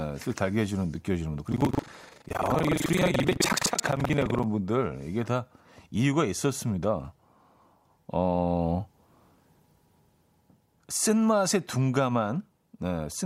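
Speech with buffer tearing from 1.49 to 4.47 s: a robotic buzz at about 23 Hz, each period carrying roughly a third of audio from an earlier lap, which fits a 2048-sample buffer.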